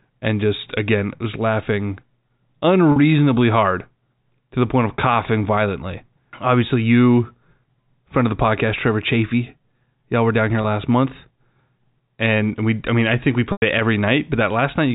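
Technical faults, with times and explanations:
2.92–2.96 s, 10.62–10.64 s and 13.52–13.62 s, packet loss with pitch repetition: the first two gaps, 40 ms and 20 ms, sound like a briefly held, buzzy tone. The 100 ms gap fades into silence before the sound cross-fades back. In each case the receiver filled missing packets of the telephone-band stream by repeating the last pitch period and fading it out over about 50 ms.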